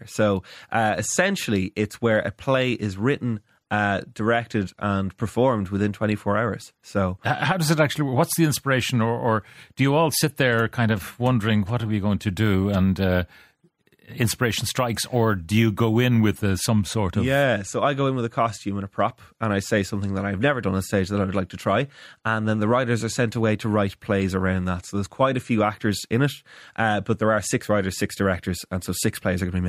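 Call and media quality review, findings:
Crude rate conversion, 12.43–16.38 s, between "are we going to" and "uh some sort of". Gritty inharmonic fizz tracking loud, bright speech, around 25 dB down. Probable resampler: 32 kHz to 48 kHz by nearest-sample repetition, unfiltered, so a fixed 2:3 repeat pattern adds unrelated tones.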